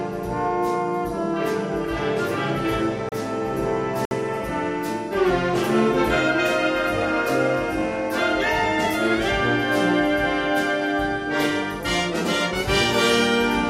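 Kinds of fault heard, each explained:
Block of digital silence: two stretches of samples drop to silence, at 3.09 to 3.12 s (about 31 ms) and 4.05 to 4.11 s (60 ms). The sound cuts out and returns abruptly with no fade, leaving a short, audible hole.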